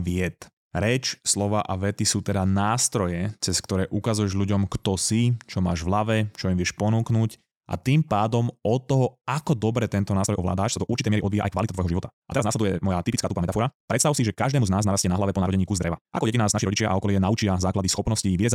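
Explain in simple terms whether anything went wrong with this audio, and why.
From about 10.19 s to the end at 18.54 s, the speech suddenly races along at roughly twice its earlier pace, sounding rushed, yet the pitch stays put. That's a time-stretched section, likely software squeezing the audio about 1.9 times faster by dropping tiny pieces.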